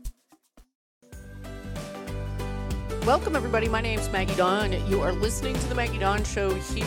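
Nothing stood out on listening; no technical faults were heard anywhere in the audio.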